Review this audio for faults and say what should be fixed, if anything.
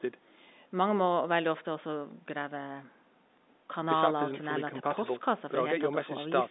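Nothing stood out on listening to this telephone-band speech, so there is nothing here that needs fixing.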